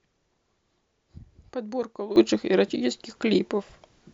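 At 2.16 s a sudden gain jump lifts the speech and its background noise together by about 12 dB, holding to the end. The likely cause is digital gain applied between two samples without a ramp. The waveform steps abruptly taller, and the spectrogram brightens evenly across all frequencies.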